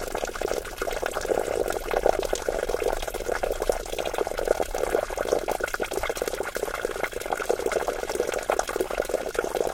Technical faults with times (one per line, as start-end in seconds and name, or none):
4.05-4.12 repeated frames
9.33 repeated frames